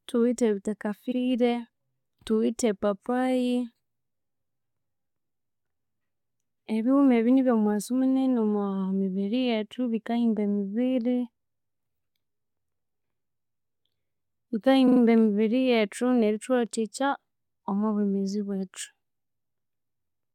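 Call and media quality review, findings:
Stutter at 1.11–1.17 s (64 ms block replayed once) and 14.87–15.00 s (about 43 ms block replayed three times, before "emibiri yethu nerithuwathikya"). Repeated frames from the codec/transport path duplicating compressed frames.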